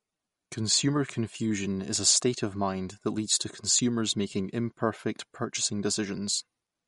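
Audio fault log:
Throughout, MP3 compression: the speech has a watery, swirly quality where weak detail flickers in and out from frame to frame, and nothing comes through above about 11.1 kHz. That's likely a low-bitrate MP3, which fits something around 48 kbps, starving quieter frequency content.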